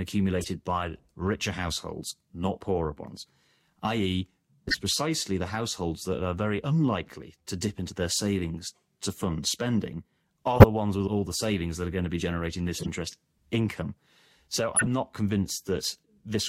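Brief chirps and bursts of noise break into the speech at 0.39, 4.69, 10.56, 12.78 and 14.76 s. Each lasts about a tenth of a second, and the one at 10.56 s is loudest. These are corrupt frames decoded: flipped bits in a few compressed frames sent energy to wrong frequencies.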